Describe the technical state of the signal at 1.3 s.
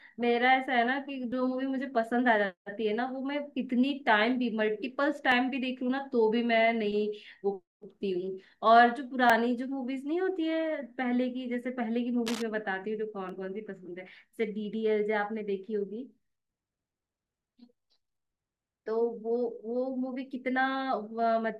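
At 1.32 s the speech has an overlap between stream segments: two 4-second segments claim the same time, and trimming the overlap deletes a few milliseconds of real audio. The waveform jumps abruptly, showing as a thin vertical broadband line on a spectrogram, heard as a tiny skip.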